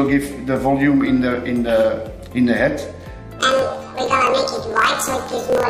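Planar audio read as interleaved, from 3.40 s to the end: each 26.12 ms block stores all left samples before all right, but is read as alternating pairs. Each block plays twice at double speed, an octave high, with a buzzy flutter at 38.3 Hz.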